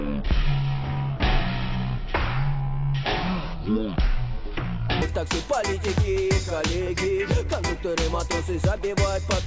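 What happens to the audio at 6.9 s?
Nothing goes wrong at 6.9 s; the audio there plays through cleanly, with no dropout, click, distortion or other fault.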